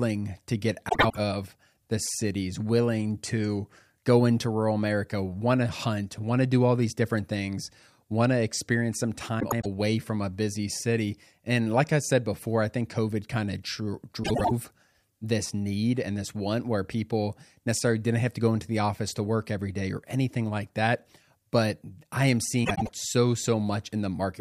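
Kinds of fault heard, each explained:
Frames out of order: four brief garbled flutters in the speech, at 0.89, 9.41, 14.23 and 22.64 s, each under 0.3 s. Two neighbouring runs of frames, each about 0.1 s, were decoded swapped, so no time is lost.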